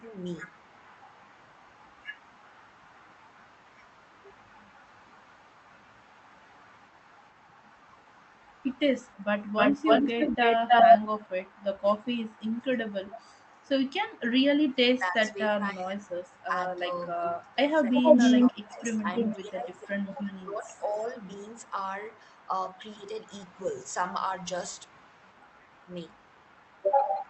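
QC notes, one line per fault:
0.0–0.14, 11.82–11.86, 14.61–21.76 and 22.49–23.06 s, speech suppressed in double talk: The sound dips while the far side talks. Drops reach about 10, 5, 15 and 15 dB. The third run loses roughly 4 s in pieces. The echo canceller likely ducked both talkers together.
0.07–14.98, 16.07–16.44, 17.42–23.94 s and 24.75 s to the end, echo leak: A delayed copy returns. Delay is 418 ms, then about 307–309 ms. It sits about 25 dB and 35 dB down, but near speech level at 17.42–23.94 s. Loudspeaker pickup likely escaped cancellation.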